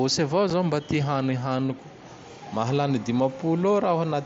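At 0.50 s a brief hole of about 7.5 ms cuts into the speech, with abrupt edges. This is unconcealed Bluetooth headset packet loss: a voice packet between headset and phone went missing, which fits a single lost packet on the mSBC link, and silence or an idle pattern filled the gap.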